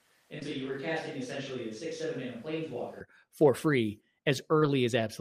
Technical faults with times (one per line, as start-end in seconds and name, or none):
0.00-3.01 switch to a distant microphone
0.39-0.43 short concealed packet loss
4.59-4.63 short concealed packet loss